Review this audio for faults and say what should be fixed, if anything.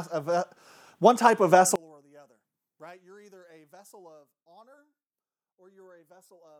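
One channel inverted, from 1.76 s to the end at 6.60 s: the sound drops by about 28 dB and turns faint, with its centre nearly gone. This is likely one stereo channel flipped in polarity, so the shared content cancels when the channels sum to mono. Check polarity on each channel at the point where the change occurs, and confirm mono compatibility before export.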